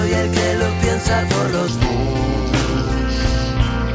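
From 1.68 s to the end, a wrong sample rate takes over. The audio plays at two-thirds speed and drops about 7 semitones. Everything sounds low and dragged. This fits audio recorded at 24 kHz but played back at 16 kHz without conversion.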